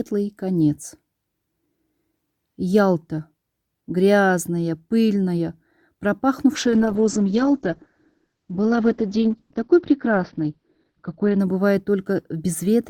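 A call bitrate drop from 6.57 to 11.45 s starves the encoder of bits, with coarseness suggesting a fall from roughly 96 kbps to about 8 kbps. The audio turns rough and watery, and its top end collapses from 20 kHz to 6 kHz, sounding muffled.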